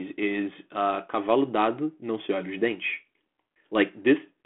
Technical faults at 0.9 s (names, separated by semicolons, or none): none